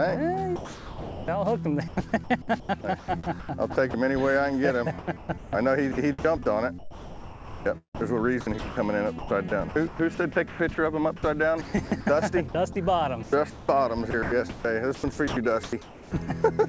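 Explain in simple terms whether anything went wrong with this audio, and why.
From 0.56 to 1.28 s the sound disappears for about 0.7 s. In its place is a steady, smooth hiss, and then the sound returns. This is sound dropped by the voice detector. The sending side likely decided the audio was just background and stopped transmitting, so the receiver filled the gap with artificial comfort noise. What sets it apart is that it happens once, as a single clean gap, rather than repeatedly.

In three later stretches the audio keeps cutting in and out. From 1.88 to 3.94 s about 0.6 s is replaced, from 4.99 to 6.25 s about 0.5 s, and from 6.79 to 16.12 s more than 3 s in total. This is sound chopped by the voice detector. The detector was likely flipping between sending and muting, so pieces of the sound turn into fake hiss. Unlike the single gap, this is a repeated on-off choppiness.

The call link's cutoff of everything above 8 kHz is normal for this kind of connection.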